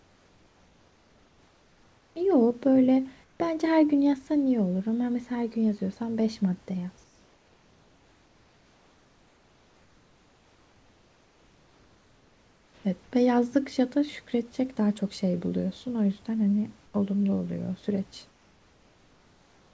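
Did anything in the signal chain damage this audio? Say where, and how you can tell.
Yes. Comfort noise in place of the background appears at 0.0–2.16 s, 3.24–3.40 s, 7.04–12.84 s, 16.86–16.94 s and 18.30–19.73 s. It happens in call processing. In each pause the room's textured background drops out and is replaced by steady, featureless noise, about 3 dB quieter (about 5 dB at 16.86 s). The likely cause is discontinuous transmission: the sender stops sending during pauses, and the receiver fills the gaps with synthetic noise.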